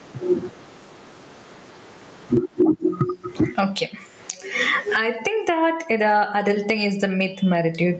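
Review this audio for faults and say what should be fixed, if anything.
Gain pumping runs through the whole speech clip, swinging by around 20 dB and squashing loud and quiet parts together. The likely cause is input gain set far too high, with a fast limiter pulling it down. Lowering the microphone's input gain so the limiter rarely engages would prevent it.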